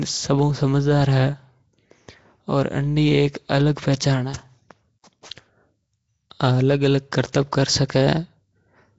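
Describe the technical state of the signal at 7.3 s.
Right at 7.33 s there's a pre-echo, a brief smear of hiss about 19 ms long sitting just ahead of a sharp onset. The coder spreads its quantisation noise across the whole transform block, so noise scaled for that loud attack also leaks into the quiet stretch before it. You hear a short rush arriving a hair early, and the attack itself comes across softened rather than crisp.

Underneath that moment, and all through the clip, the speech has the rough, hissy halo and underwater smear you'd expect from Nellymoser compression, most likely Nellymoser Asao at around 32 kbps. The damage is plainly audible. Bands the coder starves of bits get filled with noise instead of real signal, and there's nothing at all above 7.7 kHz, which flattens the top end.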